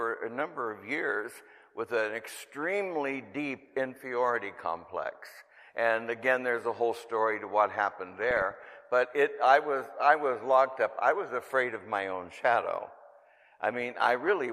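DAB burbling appears from 8.21 to 8.76 s and again from 14.15 to 14.33 s, short blips of noise over the audio. Weak reception lets bit errors, a few tenths of a percent, slip past error correction into the MP2 data, so wrong samples put short noise blips into single sub-bands.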